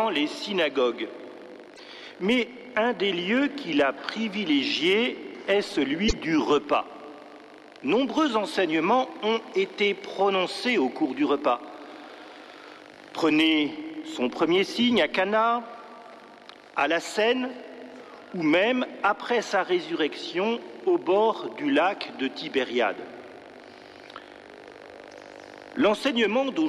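The audio has two short bursts of damaged data in a compressed stream, at 1.74 to 1.80 s and at 6.05 to 6.13 s, each lasting well under a tenth of a second. Each one is a brief chirp or blip. In those spots the compressed bytes were corrupted, so the decoder misreads or rejects the affected frames, loses its place in the stream, and has to hunt for the next valid frame header before clean playback resumes.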